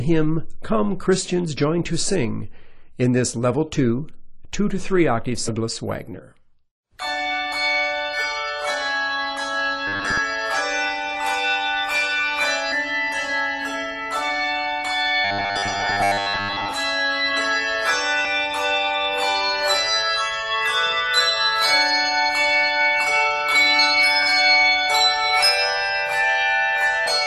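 At 5.47 s a short blip cuts through the sound, the first sign of damaged data in a compressed stream. The decoder hits corrupted bytes, fails to parse the frame, and resynchronises at the next valid header. The same squawk recurs at 7.51 s. From 9.88 to 10.19 s the sound turns into a rigid, metallic buzz at 100 Hz. This is robotic sound from repeated short buffers, with roughly half the material replaced by repeats. The likely cause is audio arriving too late, so the player loops the last 10 ms chunk, which imposes the fixed 100 Hz pitch. Another corruption blip lands at 12.71 to 12.73 s. The buzz returns more heavily from 15.25 to 16.73 s, where most of the stretch is repeated buffer content. Further decoder chirps from damaged frames follow at 18.24 s and 27.06 s.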